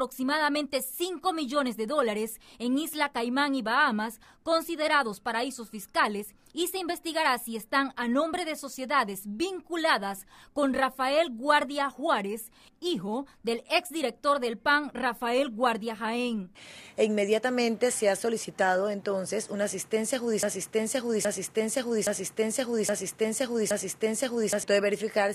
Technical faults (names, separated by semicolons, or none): broken-record loop